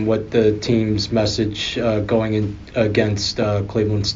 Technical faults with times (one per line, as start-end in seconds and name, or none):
3.42-3.45 loud pop